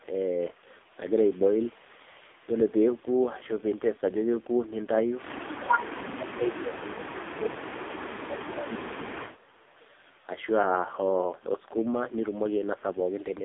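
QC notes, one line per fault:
Throughout: AMR narrowband mobile codec. The speech sounds thin, buzzy and synthetic, confined to a phone line band of roughly 300 Hz to 3.6 kHz with nothing at all above 3.8 kHz. The voice is rebuilt from a compact vocal-tract model excited by only a few pulses per 5 ms subframe. The heavy damage points to one of the lowest AMR-NB modes, around 5 kbps, where too few bits remain to keep the voice natural.
5.84 to 9.63 s: speech suppressed in double talk. Across these nearly four seconds the talker's level sinks sharply, at its deepest by around 30 dB. The likely cause is an echo canceller facing both sides talking at once. It could not separate the near talker from the far-end echo, so it pulled both down together.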